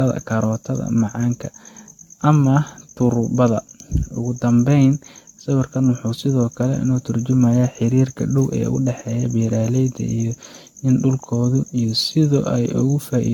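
Throughout the speech there is generation loss: a swirly, smeared, hollow quality with blurred consonant attacks and nothing above 17 kHz. It likely comes from around ten successive lossy encodes, consistent with AAC-LC near 96 kbit/s, each pass adding fresh quantisation noise and spectral holes.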